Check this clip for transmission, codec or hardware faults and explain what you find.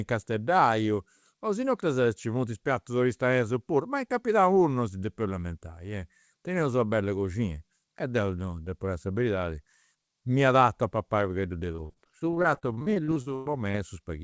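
One transmission fault is audible, heard through a call path whose content stops at 8 kHz, which fits a wideband codec such as G.722.

Repeated packet loss (robotic sound) occurs from 11.72 to 13.76 s: about twenty dropouts, the longest near 0.1 s. Each is patched by extending the preceding audio, so roughly 29% of that stretch is fill. It sounds choppy, with pieces missing. The waveform shows repeated cycles, and the spectrogram shows smeared, striped harmonics.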